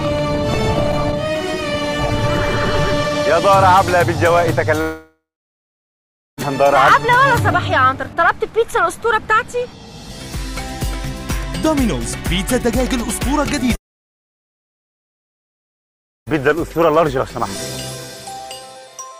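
At 4.81 s the sound smears into a fading buzz and drops to near-silence until 6.40 s, resuming without about 1.6 s of audio. The same happens from 13.75 to 16.29 s, losing about 2.5 s. Both are likely long network dropouts, with concealment filling briefly before going quiet.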